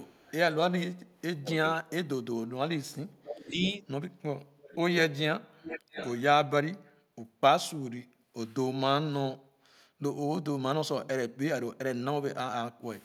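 Echo leak starts at 0 to 0.33 s and 1.07 to 1.13 s. A faint copy of the speech returns about 505 ms late. An echo canceller likely failed to remove loudspeaker pickup.

From 1.35 to 2.26 s, speech is suppressed in double talk. The talker drops by about 30 dB at the deepest. The canceller likely took both sides for echo.

Echo leaks again from 3.08 to 3.87 s, now 613 ms late. A smaller dip of about 5 dB hits 3.30 to 3.59 s.

More echo follows at 4.58 to 4.76 s and 5.62 to 6.22 s. The last stretch is loudest, about 10 dB under the speech.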